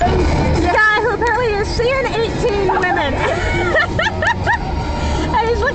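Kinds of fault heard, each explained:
Skip ahead: At about 0.71 s the audio jumps abruptly forward with no gap, its two sides butted almost directly together. Roughly a second of audio is simply missing, dropped before playback because later audio was already queued and the receiver moved straight on.
Jitter buffer speed-up: From 0.81 s to 2.23 s the audio runs about 10% fast at unchanged pitch, sounding hurried. The receiver held more audio than it wanted and trimmed many tiny pitch-period pieces, roughly 150 ms in all, to shrink the delay.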